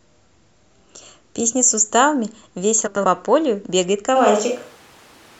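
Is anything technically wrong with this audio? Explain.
Yes. There are two faults in this speech clip.

First, frames out of order, from 2.87 to 3.05 s. Two neighbouring blocks of about 93 ms each were decoded in swapped order. That timing points to runs of four codec frames. The stretch plays with its halves exchanged. You hear a short garbled flutter. Nothing is missing. The timing after it stays intact.

Second, a switch to a distant microphone, from 4.17 s to the end. The sound suddenly becomes roomy and hollow. The bass thins out. Background noise rises to roughly 30 dB below the speech. The overall level hardly changes. The likely cause is that the close microphone dropped out and a farther one, such as a camera microphone, took over. The change happens abruptly, with no fade.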